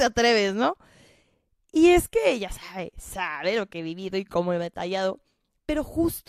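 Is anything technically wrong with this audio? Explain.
No, nothing technically wrong is audible anywhere in this recording.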